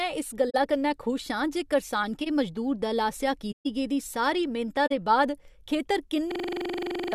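At 0.50 to 0.55 s, just before "कन्नै खुश", there's a corrupt frame concealed: the decoder caught damaged AAC data and covered it, spanning about 50 ms, which fits two frames. The same happens at 3.52 to 3.67 s, between "मजदूर दल आसेआ" and "गेदी सारी मेह्नता दे", a longer 150 ms stretch, and at 4.86 to 4.92 s.

At 2.21 to 2.27 s, right before "मजदूर दल आसेआ", a corrupt frame decoded slips through. The decoder played a couple of damaged frames as-is, so misread gains throw energy into the wrong frequencies and you get a short glitch of about 60 ms.

From 6.32 to 7.13 s there's a system hang loop. The machine froze while the audio hardware kept replaying one 42.67 ms chunk, about 19 times, which fits a 2048-sample buffer. You hear a repeating stutter at 23.4 Hz, and roughly 0.7 s of real audio is lost.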